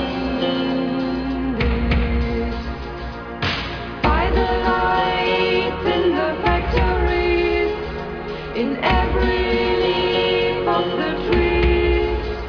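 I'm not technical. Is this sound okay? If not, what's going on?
Yes, it sounds fine; nothing in it stood out as a problem when I listened.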